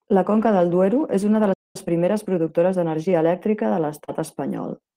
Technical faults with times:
1.53-1.76 playback stall
1.76-3.88 time-compressed catch-up
4.04-4.10 short concealed packet loss
4.08-4.14 lost packet rebuilt from error correction

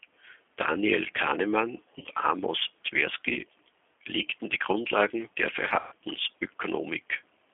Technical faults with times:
0.00-7.53 G.729 codec
1.99-2.09 VoIP packet loss concealed by the speech codec
5.79-5.95 VoIP packet loss concealed by the speech codec

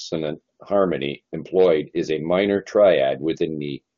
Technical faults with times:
none

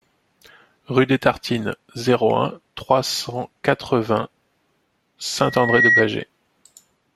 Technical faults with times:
5.40-6.11 loudspeaker feedback squeal

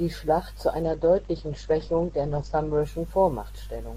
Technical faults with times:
0.82-2.82 adaptive stream at a lower bitrate

